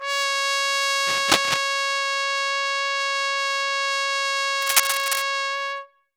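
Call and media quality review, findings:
Scratchy, rustling bursts over the music at 1.06–1.61 s and 4.61–5.22 s, each about half a second, dense and uneven, roughly as loud as the music itself. Cable scratch noise, likely from a worn cable, connector or control being moved: contact resistance fluctuating rapidly, injecting irregular noise into the signal path while in motion. Suggest reseating or replacing the lead and checking jacks and pots.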